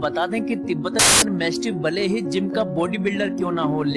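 File tags played as audio, from 0.99 to 1.22 s: an embedded cover picture, stored as compressed data, was read as if it were samples. Its random-looking bytes come out as a sudden burst of very loud white noise with hard edges, lasting about 0.23 s.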